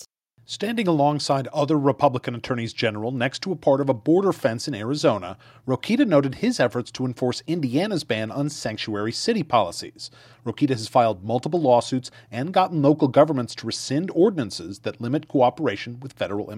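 No technical fault can be heard anywhere in the audio.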